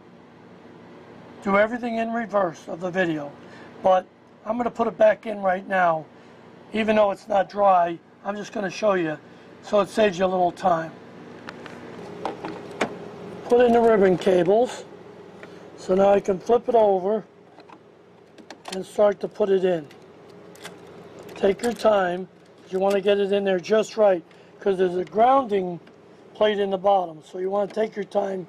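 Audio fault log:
No technical faults can be heard anywhere in this recording.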